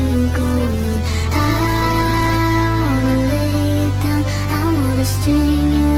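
From 0.43 s to 2.43 s there is a call bitrate drop: the connection's bandwidth estimate collapsed and the encoder was forced onto a much smaller bit budget, consistent with a fall from 48 kbps to 12 kbps. Held at that floor for about 1.9 s, the codec quantises far more coarsely and trims the upper frequencies, so the audio turns muffled, rough and watery until the bitrate climbs back and clarity returns.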